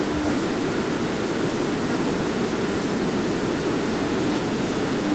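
No technical faults can be heard in the speech. The call path's band limit leaves nothing above about 8 kHz, which fits a wideband Opus call setting.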